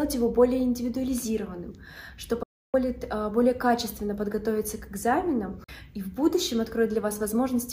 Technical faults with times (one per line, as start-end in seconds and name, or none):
2.43-2.74 Bluetooth dropout
5.64-5.69 Bluetooth dropout